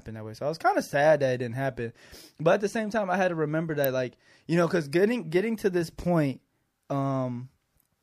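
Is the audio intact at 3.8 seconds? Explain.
No. At 3.84 s, between "I had to remember" and "like you know because", a sharp snap sits on top of the speech, peaking near -10 dBFS. This electrical switching spike is likely a nearby switch, motor or static discharge arcing briefly and coupling into the audio line.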